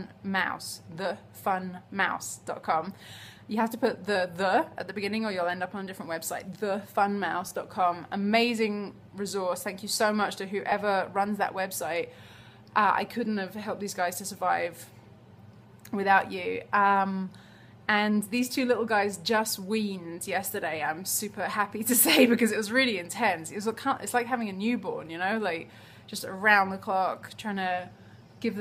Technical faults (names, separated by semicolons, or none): lost LE Audio frames